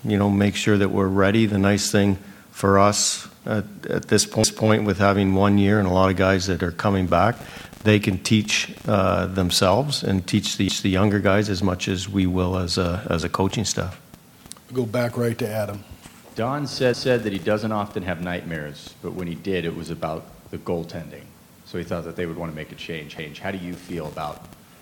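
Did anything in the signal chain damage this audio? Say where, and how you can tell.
Yes, there are overlapping chunks at the buffering stage. Quarter-second stutters at 4.44, 10.69, 16.94 and 23.19 s replay 250 ms of audio each time. The audio's cut into 6-second chunks, and each join starts before the previous chunk finished, so the tail repeats.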